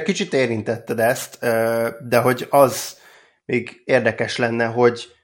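From 0.75 to 3.14 s the speech carries a bright, metallic fizz that rises and falls with its level. This is imaging from sample-and-hold upsampling: repeated samples without smoothing mirror the spectrum into roughly 11 to 22 kHz at about -21 dB, which points to an original rate near 22 kHz.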